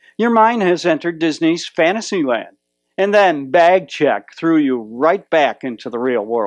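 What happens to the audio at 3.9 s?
Nothing goes wrong at 3.9 s: the audio plays through that moment intact, with no dropout, click or other fault to be heard.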